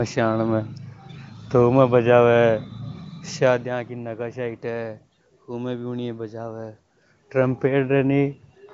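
No technical faults are audible.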